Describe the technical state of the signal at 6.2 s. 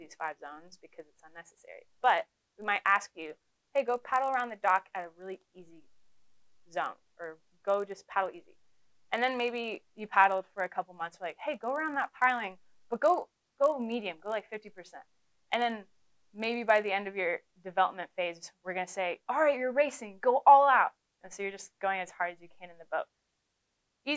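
A steady 50 Hz buzz rides on the sound at 6.2 s, part of a span running from the start to 16.9 s. It comes from the resampler restarting on every block: each 20 ms block was converted from 44.1 kHz to 16 kHz in isolation, leaving a small error at every block edge.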